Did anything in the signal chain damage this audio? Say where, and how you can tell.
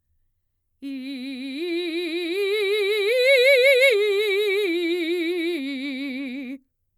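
No, nothing in the signal chain has damaged this music recording. No stage of the chain leaves an audible mark anywhere in the clip.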